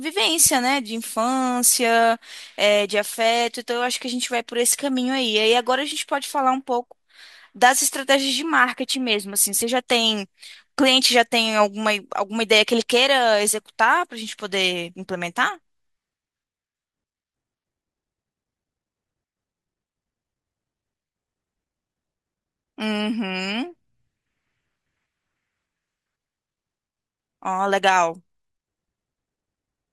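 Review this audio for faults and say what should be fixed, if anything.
Nothing needs fixing; no faults can be heard.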